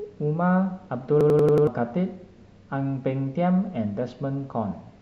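From 1.21 to 1.67 s, a system hang loop replays one 92.9 ms chunk five times at 10.8 Hz, a machine-gun stutter fitting a 4096-sample buffer.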